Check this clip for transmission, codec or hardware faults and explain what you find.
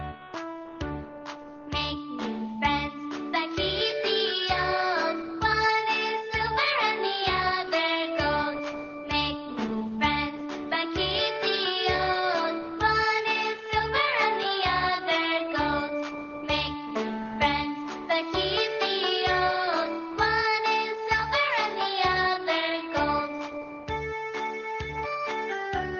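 Nothing here points to a transmission, codec or hardware problem; the audio comes through steady and intact the whole way.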